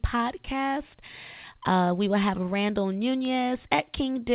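Speech recorded over a telephone-style call line, with the sound stopping at 4 kHz as that line allows, and with nothing technically wrong with it.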